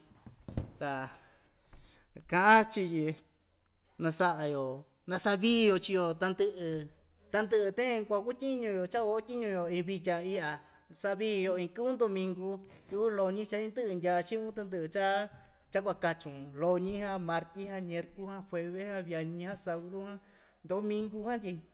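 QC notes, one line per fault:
No faults are present in this speech clip. It has come over a WebRTC call path with nothing above 4 kHz, which fits narrowband telephone coding such as G.711 A-law.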